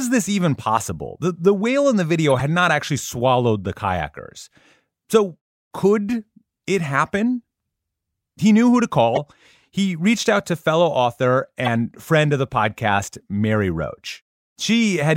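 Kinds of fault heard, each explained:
Corrupt frame decoded: damaged compressed frames were played instead of concealed, so misread gains and codes put energy in the wrong frequency bands for a few frames at a time. Short glitches land at 2.30–2.42 s after "the whale in the", 9.15–9.19 s after "knew who to", and 11.63–11.68 s after "out to fellow author". A spectrogram shows brief blocks of misplaced energy, and the waveform shows spikes peaking near about −5 to −10 dBFS.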